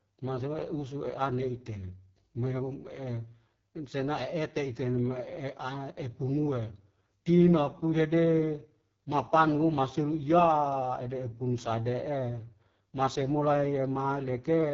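From start to finish the speech carries heavy AMR wideband (HD Voice) codec damage. It sounds rough and raspy, which fits the lowest AMR-WB rate of about 6.6 kbit/s. The vocal tract model is starved of bits. Nothing is present above 7 kHz.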